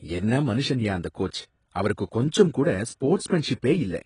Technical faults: AAC compression

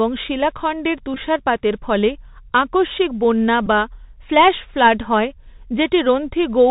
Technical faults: Bluetooth CVSD headset codec; Bluetooth headset packet repeated

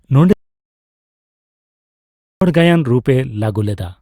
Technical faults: audio dropout to silence

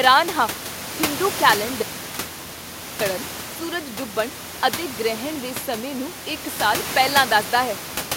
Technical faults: audio dropout to a faint residue

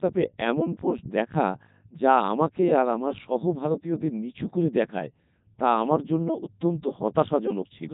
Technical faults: Codec 2 vocoder

